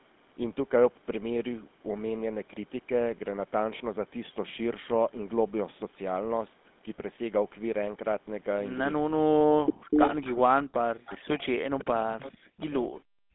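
Throughout, the speech carries the buzzy, gravelly texture of the GSM full-rate codec at 13 kbps. The model of the vocal tract is driven by sparse, regularly spaced pulses, so voicing turns rough and grainy. Nothing survives above 3.8 kHz, and the line band sits at 200 Hz to 3.6 kHz. Plain band-limiting would only sound muffled. This roughness rides on the voice itself, which points to the codec.

From 9.0 to 9.96 s the speech dips sharply, at its deepest by around 40 dB, across roughly 0.7 s of choppy cuts. It happens again between 10.43 and 12.91 s, this time over about 2 s in total. This is likely speech suppressed in double talk: with both ends active, the echo canceller could not tell the talker from the loudspeaker return and pulled everything down. Unlike a network dropout, the gaps come and go in pieces that follow the overlap.

An echo leak appears in and around those stretches, as a delayed copy of the speech arriving about 0.41 to 0.43 s late. 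It comes in scraps at 9.66 to 9.74 s and 9.92 to 10.34 s, both close to the level of the direct speech. Three fainter bursts follow at 11.1 to 11.15 s, 11.95 to 11.99 s and 12.2 to 12.31 s, well below the speech. The likely cause is loudspeaker pickup that the canceller failed to remove. The fixed delay is what separates this from room reverberation, which would smear continuously.

At 13.19 s, through to the end, the room sound itself drops by about 39 dB for roughly 150 ms. This is background gated by the echo canceller: the canceller clamped the microphone while the loudspeaker played. It differs from the double-talk suppression because here the ambience vanishes, not the talker.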